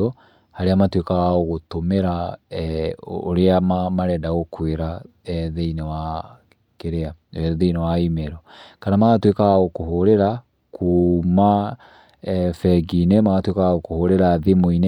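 No technical faults can be heard anywhere in the speech. Nothing in the recording calls for a timestamp or a note.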